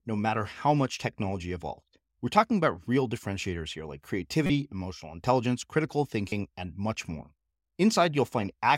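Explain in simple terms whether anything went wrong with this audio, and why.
Two short corrupt frame decoded faults break into the speech, at 4.46–4.50 s and 6.29–6.40 s, the second lasting longer. Damaged data was played anyway, so instead of the silence a lost chunk would leave, you hear brief squeaky, noisy blips.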